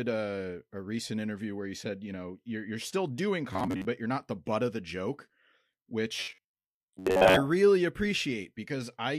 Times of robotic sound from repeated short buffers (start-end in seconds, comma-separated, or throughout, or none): 3.53-3.87, 6.16-7.36